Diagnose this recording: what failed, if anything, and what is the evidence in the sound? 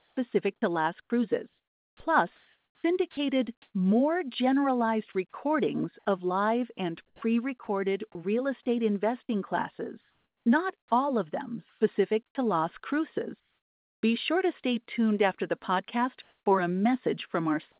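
Speech breaks up from 0.0 to 3.74 s, 7.07 to 7.67 s and 10.01 to 12.35 s, with about 1.5 s, 0.18 s and 0.78 s replaced by a flat hiss. This is sound chopped by the voice detector, likely at the call-processing stage, switching transmission on and off.

At 5.3 s, a 30 ms gap of steady noise cuts into the speech, losing about 20 ms of real sound. This is sound dropped by the voice detector: the sender likely took quiet speech for background, stopped sending, and the receiver filled the gap.

The background turns featureless from 13.4 to 14.03 s, about 1 dB quieter, and from 16.22 to 16.46 s, about 4 dB louder, in pauses far below the speech. This is comfort noise in place of the background, likely synthesised by the receiver during discontinuous transmission, over a narrowband G.711 path with nothing above 4 kHz.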